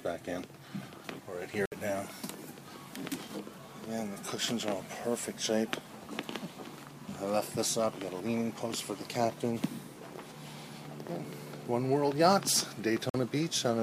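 At 1.66 to 1.72 s and again at 13.10 to 13.14 s, a block of digital silence, 62 ms then 46 ms long, cuts the sound abruptly to silence, likely from an unfilled output buffer. The second gap fits a 2048-sample buffer. Abrupt edges at both ends, with no fade, distinguish it from a gentle dropout.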